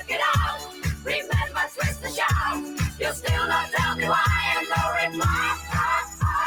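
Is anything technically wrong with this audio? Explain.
Yes. A speech-oriented noise suppressor was left running, so this is a case of noise suppressor applied to music or sounds. It treats steady tones and ambience as noise, pulling them down by around 10 dB. Level pumps, sustained parts thin out, and tails sink while onsets survive.

There are five sections where the suppressor cut the sound hardest: 0.55–1.32 s (about 10 dB, roughly half a second affected), 1.49–2.17 s (about 9 dB), 2.64–3.26 s (about 8 dB), 5.56–5.74 s (about 6 dB) and 6.05–6.22 s (about 10 dB). Held material sinks or decays early there, leaving audible dips.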